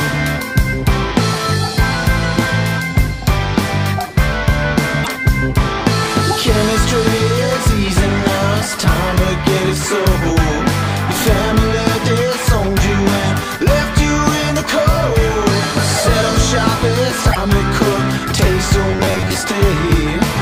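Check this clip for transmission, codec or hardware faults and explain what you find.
Two kinds of fault are present: brief decoding glitches from corrupted compressed data, and a short stretch of robotic buzzing near the end.

At 5.00 to 5.09 s and again at 17.28 to 17.36 s, each lasting about 80 ms, the audio breaks into a short glitch. This is damaged data in a compressed stream. Bad bytes in those frames leave the decoder unable to read them correctly, so it loses sync and skips ahead to the next valid frame header.

From 18.91 to 19.34 s the sound turns rigid and metallic, with a fixed buzz at 93.8 Hz while the underlying contour still comes through loosely. This is robotic sound from repeated short buffers, likely caused by audio arriving too late, so the playback repeats the last fragment of about 10.7 ms to fill the gap. That repetition period sets the buzz pitch. Roughly half of this stretch is repeated material, and the real audio it replaces is lost.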